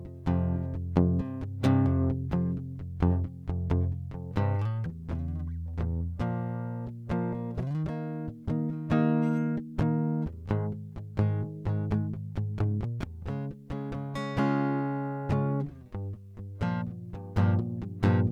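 Nothing goes wrong anywhere in this piece of music; there are no technical faults to point out.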